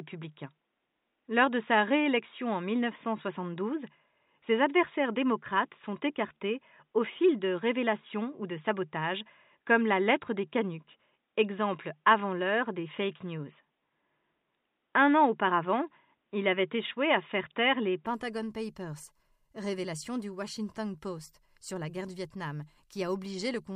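From the start until 18.06 s, the recording was likely made on a poorer input device, with the system switching to the better one only at that point. Throughout that stretch nothing is heard above 3.8 kHz, so the speech sounds dull and boxy and sits over a faint, different noise floor. At 18.06 s the sound opens up abruptly with no gap, and the level shifts by a few decibels as the input switched device.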